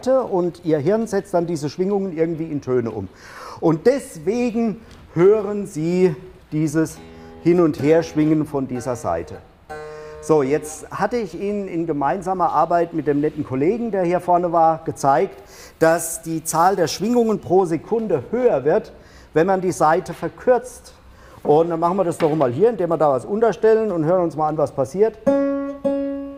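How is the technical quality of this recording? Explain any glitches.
One glitch is audible. From 15.33 to 17.33 s, pre-emphasis is left on. The treble boost matching a 50 µs FM curve goes uncorrected, lifting 10 kHz about 10 dB above 1 kHz. The sound turns thin, bright and sibilant, a smooth rising tilt rather than gritty distortion.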